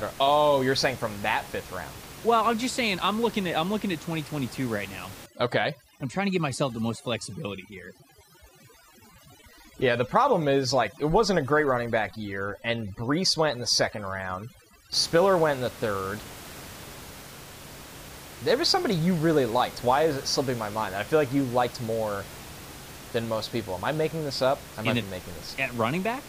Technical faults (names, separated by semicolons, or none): overdone noise removal